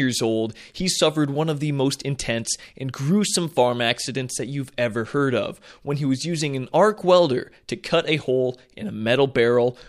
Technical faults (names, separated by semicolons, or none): none